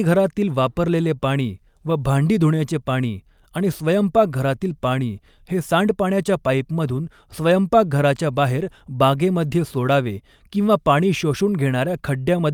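From the start of the speech the sender's clock runs about 2% slow relative to the receiver's, a case of clock drift between sender and receiver. Samples arrive more slowly than the receiver plays them, so its jitter buffer keeps draining instead of holding a steady level. The mismatch persists for the entire clip, so the receiver can never settle into a stable playout rate and has to keep compensating for the shortfall.

That compensation shows up as repeated timing corrections from 0.22 s to 12.38 s. Each correction duplicates a short slice of audio to refill the draining buffer. The edits all stretch the sound and are spaced unevenly. In total they add about a fifth of a second, so playback runs at roughly 98% of the original pace. Each one is small, heard if at all as a slight hiccup or a small stumble in the rhythm.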